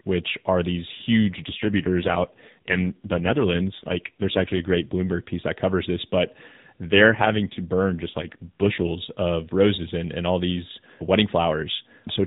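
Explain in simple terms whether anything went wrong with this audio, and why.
Speech turns rough and robotic from 1.23 to 5.13 s, right after "which are these", and again from 6.84 to 8.88 s. That's an AMR rate drop: the weak phone link spent its bits on error protection instead of sound.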